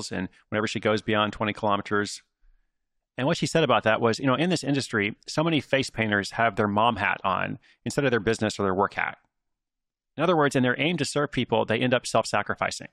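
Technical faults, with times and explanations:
No technical faults can be heard in this speech recording. There is nothing in the audio to mark with a time or explain.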